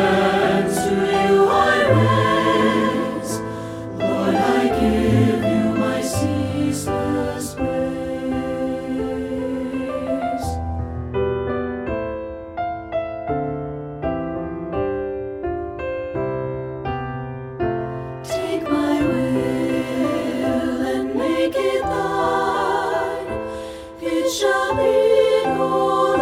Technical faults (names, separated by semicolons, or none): none